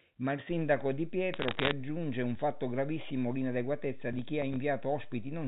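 At 0.50 s a DC step shifts the waveform's zero line and the offset holds to the end of the clip. It is heard as a single low thump while the speech carries on; the waveform visibly rides off-centre, and the spectrogram shows a brief low-frequency stripe at the jump.

From 1.34 to 1.71 s, bit errors on a digital phone line scatter sharp ticks over the speech. The error rate is around half a percent of bits. Each flipped bit spoils one sample of the A-law stream, so the waveform shows isolated spikes and the spectrogram thin vertical lines, all capped near the 4 kHz telephone limit.

Between 4.13 and 4.56 s, processor overload crackle gives a gritty tearing. About five audio buffers, each roughly 5 ms long, missed their deadline and were replaced by silence. The waveform has short hard-edged dropouts to silence, and the spectrogram shows narrow broadband clicks at each edge.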